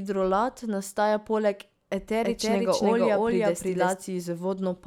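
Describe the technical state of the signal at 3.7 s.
At 3.7 s a doubled audio track is present, running from 2.23 to 3.93 s after "nastaja poleg". A second copy trails by roughly 0.3 s, about as loud. It is likely a slower second capture path.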